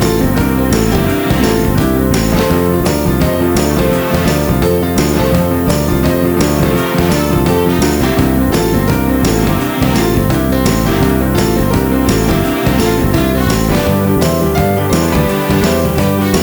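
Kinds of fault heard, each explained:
Low bit depth with noise shaping: the whole clip sounds like it's been squeezed down to around 6 bits, so every sample gets rounded coarsely, and that rounding error is pushed up toward the high end rather than spread evenly. What you get is a constant, thin hiss that climbs sharply toward the top of the band, sitting only about 15 dB under the sound itself, so it's never far from the foreground.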